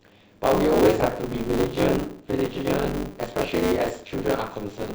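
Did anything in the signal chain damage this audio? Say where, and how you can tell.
Yes, there's buffer tearing at the driver or buffer stage, running the whole way through. A steady robotic buzz at 100 Hz rides on the speech. The writer and reader have slipped, so about half of every period replays audio from around 30 ms earlier.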